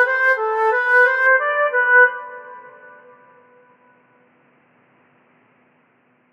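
At 1.27 s the music abruptly turns dull and boxy and stays that way to the end, with nothing above 3 kHz and a faint new noise floor well below the signal. There is no gap at the change and no obvious level jump. The likely cause is the input switched to a poorer device.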